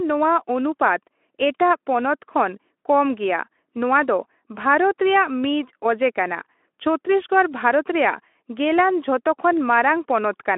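There are no technical faults to describe in this speech at any point in time.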